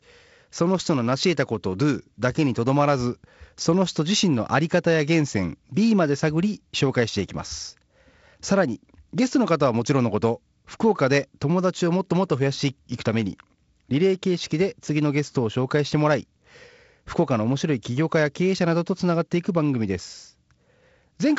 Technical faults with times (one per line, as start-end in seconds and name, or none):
none